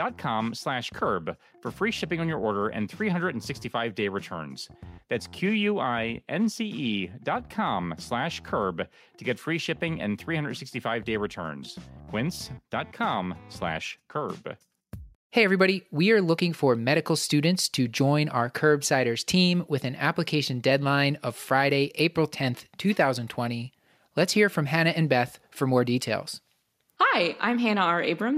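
Nothing stood out on listening to this audio.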